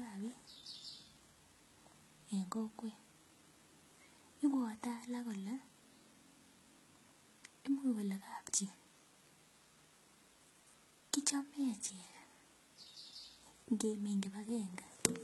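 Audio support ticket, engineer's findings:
HE-AAC compression, throughout. Treble bright but synthetic, s sounds gritty and lispy, harmonics misaligned above the crossover. Likely spectral band replication rebuilding the top band from copied lower bands. Heavy damage, consistent with a very low bitrate near 16 kbps.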